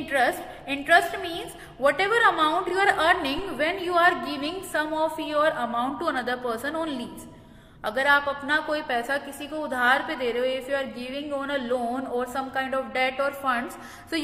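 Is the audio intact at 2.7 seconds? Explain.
No. At 2.68 to 2.71 s there are repeated frames. A short run of compressed audio was stored or sent twice, so the decoder plays the same stretch again right after the first pass. The repeated stretch lasts about 35 ms, which fits a run of roughly five frames. It plays back once extra, and it is heard as a brief stutter. The clip runs about 35 ms longer than the original.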